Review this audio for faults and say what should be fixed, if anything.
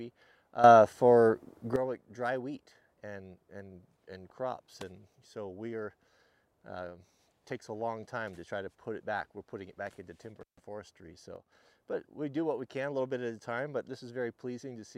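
There are two sudden gain jumps. From 0.64 to 1.76 s the level leaps up by about 12 dB, and from 11.36 to 11.52 s it drops by about 6 dB. In both spots the sound and the background noise shift together at one instant, with no ramp at either edge. That's likely a gain setting or bit shift applied in the digital path from one sample to the next. Smoothing every gain change over a few milliseconds would stop it.

There's also an intermittent contact at 10.41 to 10.60 s. The line opens for about 144 ms, so the sound drops out or breaks up, with crackle at the edges and hiss filling the gap while the connection is open. That points to a loose cable or plug rather than anything in software. Reseating or replacing that cable and securing the connectors against movement should keep it from happening again.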